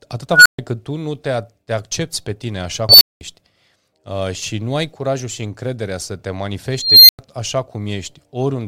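An unstable filter squeals three times: 0.33–0.59 s (near 1.5 kHz), 2.89–3.21 s (near 5 kHz) and 6.73–7.19 s (near 4 kHz). Each tone swells, clips, then drops into brief silence.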